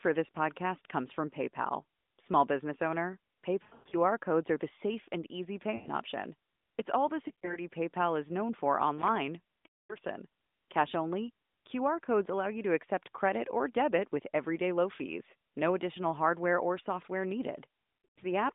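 Lost AMR speech frames break up the speech at 3.64 to 3.95 s, 5.76 to 5.89 s, 7.28 to 7.59 s, 9.66 to 9.96 s and 18.04 to 18.24 s. Corrupted radio frames forced the decoder to repeat its last good settings at falling gain. Brief single losses near 7.3 s give quick warbles. Longer runs, up to about 240 ms near 9.7 s, smear and fade toward silence. The voice then returns rough for a moment over the narrowband 200 to 3600 Hz line.

A loose connector crackle runs from 8.98 to 9.16 s. A worn contact made and broke rapidly, chopping the signal. It is heard as an irregular burst of scratchy crackle.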